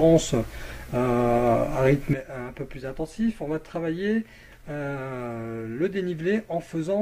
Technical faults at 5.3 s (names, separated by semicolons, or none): sudden gain jump